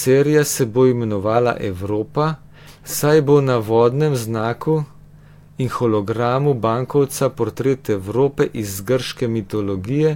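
Nothing here calls for comment, since the recording runs along without a single technical fault turning up at any point.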